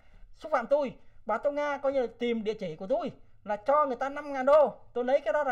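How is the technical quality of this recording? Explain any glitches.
The recording has one fault, channel delay (comb filtering), which runs for the whole clip. One channel lags the other by about 1.5 ms, and when the two are folded to mono, shared content cancels at evenly spaced frequencies, the first near 300 Hz. The result sounds hollow and phasey. Unlike a flanger's moving sweep, these notches stay fixed, so the coloration never shifts or swirls.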